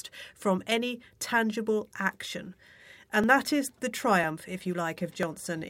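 From 0.25 s to 5.23 s the speech carries periodic USB or driver dropouts: a short tick recurs about every 1.0 s, seven or so in all. Each time, roughly a millisecond of audio is skipped outright rather than replaced by silence, so the waveform jumps straight from one point to a later one. That discontinuity produces the click. Because the gaps are evenly spaced, the ticks form a steady once-per-second rhythm audible only under signal.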